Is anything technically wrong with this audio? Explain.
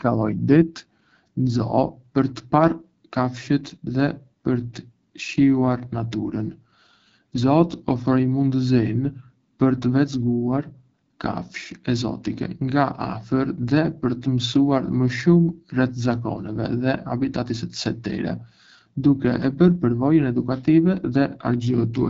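Yes. The speech carries AMR wideband (HD Voice) codec damage throughout. It is plainly audible, and the roughness points to one of the lowest rates, which fits 8.85 kbit/s. The vocal tract model strains there, so the voice sounds raspy and coarse. Nothing is present above 7.5 kHz.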